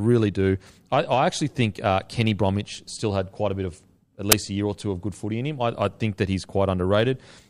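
A speech clip in which the player reads the file's embedded tag data, here a compressed cover picture, as though it were samples, the fault known as file tags played as audio. At 4.32 s this produces a brief, hard-edged burst of very loud white noise.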